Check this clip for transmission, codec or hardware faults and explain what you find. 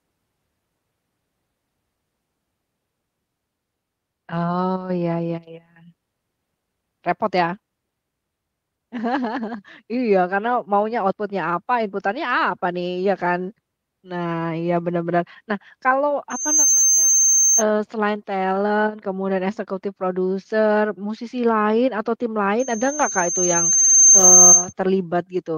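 A loudspeaker feedback squeal occurs twice in this speech. From 16.30 to 17.63 s, and again from 22.59 to 24.73 s just after "musisi lain atau tim", a piercing 6.3 kHz tone swells above the speech. The first rises within a fraction of a second to about 5 dB over the speech. The second builds gradually over roughly a second and a half to about 15 dB over it. The microphone is picking up its own loudspeaker, and the loop gain exceeds unity at that frequency.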